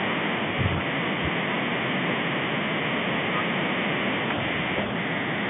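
No technical faults can be heard in this speech.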